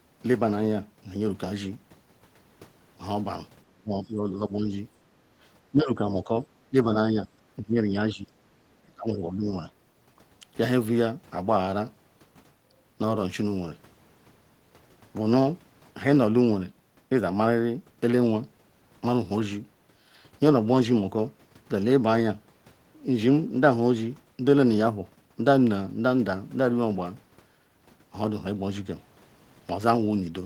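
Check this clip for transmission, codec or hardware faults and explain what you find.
Two echo-canceller faults turn up, all between 3.7 and 9.7 s.

Speech suppressed in double talk, at 3.66–4.71, 5.71–6.30, 6.70–6.76, 7.04–7.28, 7.56–8.29 and 8.86–9.65 s: the speech sags and breaks into pieces, sinking roughly 30 dB at first and later about 15 dB, with only a slight dip at 7.04. The likely cause is a canceller that mistook the talker for loudspeaker echo while both sides spoke and attenuated everything. A waveform shows the envelope hollowing out in chunks, and a spectrogram shows the upper bands thinning in those spans.

Background gated by the echo canceller, at 5.17–5.38 s: for about 0.2 s the room tone ducks by about 7 dB as the canceller clamps the microphone during loudspeaker playback, then releases. On a spectrogram the noise floor shows a brief, shallow notch across all frequencies, with a step back up when the canceller releases.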